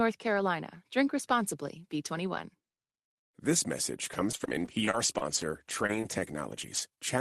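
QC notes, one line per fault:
4.13–7.03 s, repeated packet loss (robotic sound): a dozen or so short dropouts, none longer than about 24 ms, each bridged by stretching the preceding sound. About 240 ms goes missing and roughly a second is rebuilt, giving choppy sound with pieces missing.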